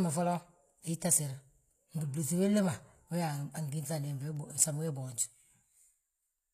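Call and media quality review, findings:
HE-AAC compression damage throughout the speech, plainly audible. S sounds gritty and lispy; treble metallic, harmonics not lining up with the band below; nothing above 14.9 kHz. Likely HE-AAC encoder at a bitrate around 24 kbps, treble rebuilt by copying lower bands upward.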